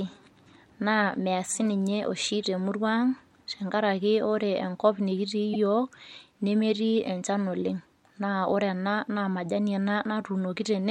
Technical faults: repeated frames

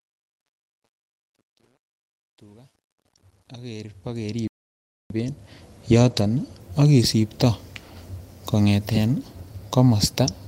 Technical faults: truncation distortion on a fade; playback stall; lost packet rebuilt from error correction

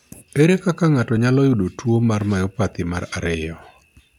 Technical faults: clock drift buffer slips

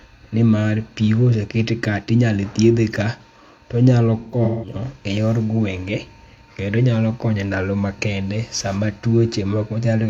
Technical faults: AAC frame loss with concealment

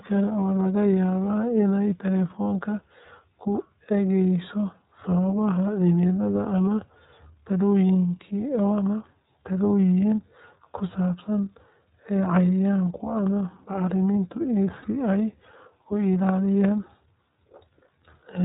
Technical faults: iLBC codec; lost iLBC frames

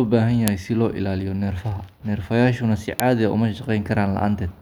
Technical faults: file header played as audio

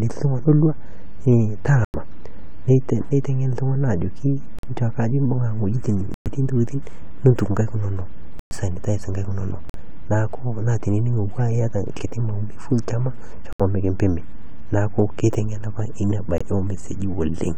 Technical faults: corrupt frame muted

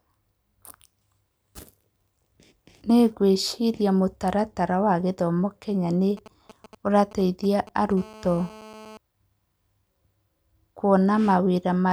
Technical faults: GSM signalling bursts; GSM phone buzz

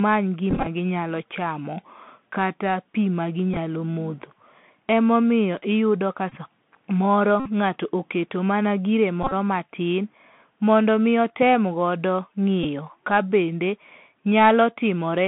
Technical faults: Bluetooth CVSD headset codec; Bluetooth headset packet repeated

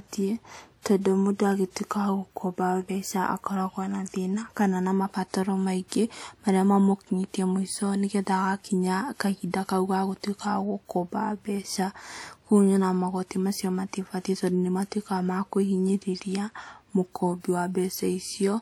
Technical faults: pre-echo

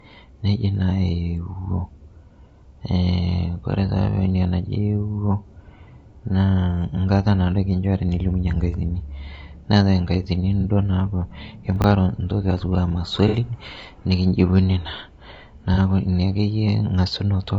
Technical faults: low-delay AAC compression; AAC frame loss with concealment; chunks out of order

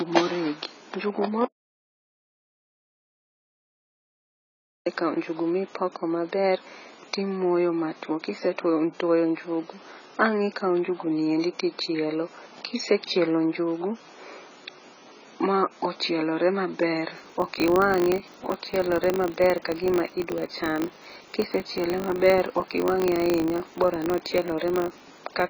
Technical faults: AAC compression; audio dropout to silence; filter restarted on every block

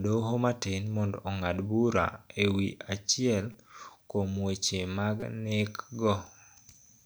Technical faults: repeated buffer

